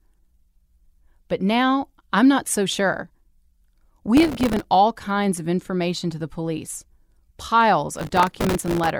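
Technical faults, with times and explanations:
4.17–4.64 s and 7.96–8.90 s, processor overload crackle: gritty tearing sits on the speech just before "all kinds of information" and again after "to the police piles". The processor keeps missing the deadline for very short buffers, a millisecond or two each, dozens in the first burst and around a hundred in the second, and replays stale audio each time. The dense run of hard-edged fragments, stopping once the load eases, sets it apart from a single dropout or steady clipping distortion.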